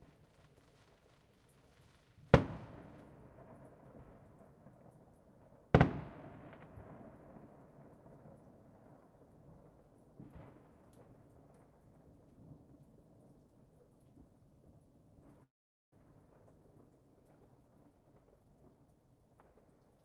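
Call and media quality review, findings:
Call audio freeze, 15.43–15.95 s: sound cuts to near-silence for about 0.46 s, then resumes where it stopped with nothing skipped. Likely packet delay draining the jitter buffer; the receiver filled roughly 0.49 s, pushing later audio back by that much.

Jitter buffer speed-up, 17.55–19.80 s: audio runs hurried at about 121% speed with pitch unchanged. The buffer was overfull after the freeze, so the receiver trimmed many short pitch-period slices, about half a second in total, to cut the added delay.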